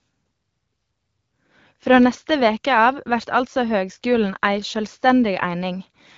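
Nothing in this speech clip points to a technical fault. The sound carries the light coloration of an AMR wideband (HD Voice) codec path, with nothing audible above about 7.4 kHz, and its clarity fits a rate of around 12.65 kbit/s.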